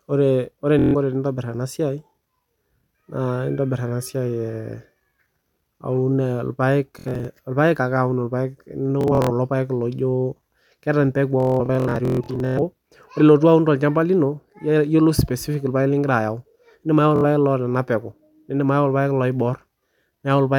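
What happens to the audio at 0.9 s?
A Bluetooth stutter runs from 0.79 to 0.95 s. Packets arrived late or not at all, so the receiver kept replaying its last short buffer, giving a rapid machine-gun buzz. When the speech resumes, roughly 140 ms of it is missing, consistent with about six lost packets.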